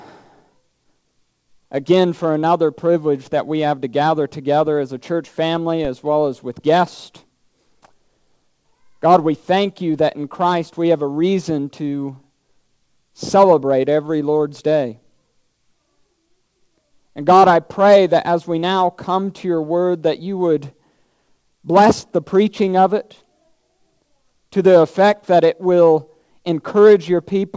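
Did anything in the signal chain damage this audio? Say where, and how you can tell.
Yes. A DC step at 5.85 s sounds as a single low thump. The converter's zero line jumps, then the offset bleeds away through a 20 Hz high-pass.

Scattered short gaps between 13.96 and 14.53 s produce about four brief ticks or smears. These are network packet losses, with each hole of up to roughly 15 ms patched by extending the preceding sound.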